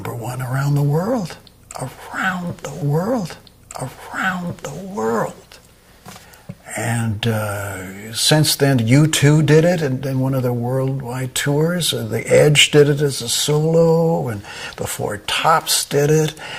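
At 2.81 s there's a stream segment repeated: the player grabbed the same chunk twice, so the two seconds up to 4.81 s play again straight after themselves. You'll catch a small blip right at the jump back, and then that stretch of audio rolls by a second time, adding a full 2 s to the running length. It's the kind of thing a playlist or buffering hiccup on the player side produces, rather than anything in the recording itself.

Later, from 12.35 s to 12.83 s, there's a burst of hard clipping. Something in the chain is being driven about 4 dB past what it can pass, so the peaks get sliced off flat instead of following the waveform. Those squared-off tops throw extra harmonics way up the spectrum, and over that half second it comes across as a crackly, gritty edge on the loudest moments, not a smeared fuzz over everything.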